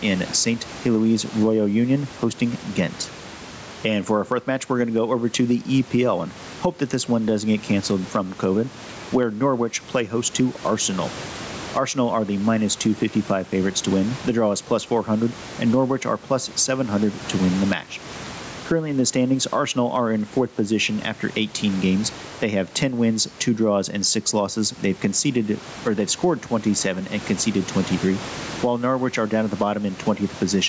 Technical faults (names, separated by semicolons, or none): gain pumping